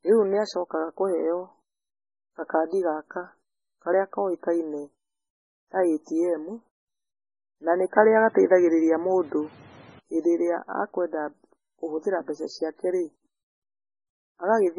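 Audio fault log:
Throughout: MP3 compression, heavy. The speech has a watery, swirling quality, and there is no content above 10.5 kHz. That fits a low-bitrate MP3 encode of around 16 kbps. At a rate that low the encoder runs short of bits, so it removes the treble above a fixed cut-off and drops quieter spectral components. Those components come and go from frame to frame, which is what gives the sound its unstable, smeared texture, and consonant attacks lose their sharpness.
7.98 to 9.99 s: input switched to a poorer device. Just after "na nĩ", the sound turns duller and narrower, and nothing remains above 8.2 kHz. The level moves by roughly 5 dB and a new background noise floor comes in, sitting about 30 dB below the speech. The switch itself has no gap. Full bandwidth returns at "hĩndĩ ĩrĩa akwenda kũhũthĩra". The likely cause is a brief change to a lower-grade microphone or headset profile.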